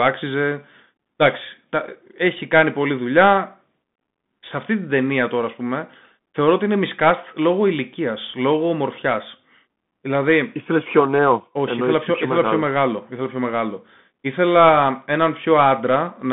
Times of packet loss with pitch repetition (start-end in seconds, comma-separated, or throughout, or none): none